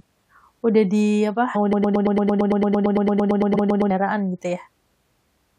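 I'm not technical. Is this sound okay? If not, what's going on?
No. There are two problems in this speech clip.

Damaged data in a compressed stream, at 1.54 s and again at 3.54 s. The audio was stored in a compressed format, and small bits of that file got scrambled. When the player reaches a spot it can't read, it stumbles, skips ahead to the next readable piece, and you hear a brief chirp or blip, each lasting only a fraction of a second.

Broken-record loop, from 1.73 s to 3.90 s. Here the speech gets stuck: a tiny slice about 113 milliseconds long plays over and over, 23 times in a row, like a scratched record. The likely cause is that the playback or the stream stalled and kept resending the last scrap it had. Whatever should have been heard during those two seconds is gone.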